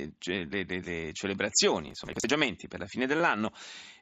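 From 1.88 to 2.30 s, processor overload crackle: the processor repeatedly misses its deadlines for buffers of roughly 10 ms, and each missed buffer is skipped. Dozens of tiny hard-edged gaps in a row tear through the speech as gritty crackle that stops at 2.30 s.

At 3.18 to 3.20 s, concealed Bluetooth headset packet loss: about 22.5 ms of the headset link's audio went missing, which fits a few lost frames. The receiver patches the hole by repeating recent waveform, so a brief buzzy hold replaces the speech, with a slight warble as real audio resumes over the mSBC link's faint grain.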